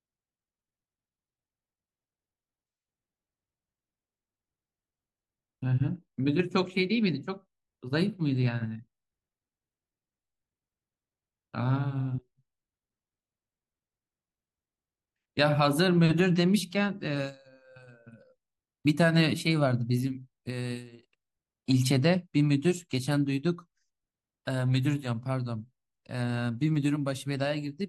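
No technical faults are audible anywhere in the recording.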